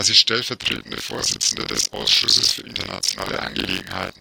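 From 0.60 s to the end, buffer tearing gives the speech a robotic 46.9 Hz rattle, which fits a 1024-sample buffer. Writer and reader pointers cross each period, so roughly two-fifths of each buffer replays audio about 40 ms old. The waveform shows hard splices, and the spectrogram shows evenly spaced vertical seams.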